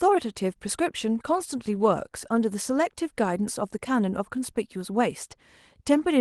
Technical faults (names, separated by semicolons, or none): none